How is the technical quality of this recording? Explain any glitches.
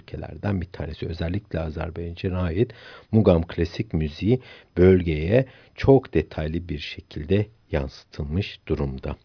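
The technical quality of the recording is good, with no glitches to explain.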